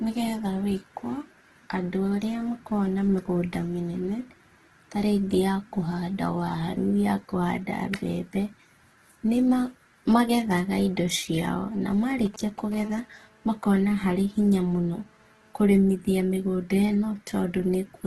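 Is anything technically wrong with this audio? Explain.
Yes, there are three faults.

Throughout, the speech sounds rough and grainy, with nothing above 12.3 kHz. This is likely Opus compression in its CELT music mode at a low bitrate, around 12 kbps. Starved bands are filled with folded or noise-like energy, so it sounds gritty rather than swirling like MP3.

From 11.89 to 12.75 s, GSM signalling bursts appear. A nearby 2G phone sends short groups of radio pulses, which the audio circuit rectifies into a galloping dit-dit-dit of brief 217 Hz buzzes. They sit roughly 15 dB below the speech.

From 12.76 to 15.60 s, this becomes a steady GSM phone buzz. The phone is now transmitting continuously at 217 bursts per second, producing a hard, raspy, harmonic-rich buzz at about 30 dB below the speech. Its unbroken drone distinguishes it from the intermittent signalling pattern just before it.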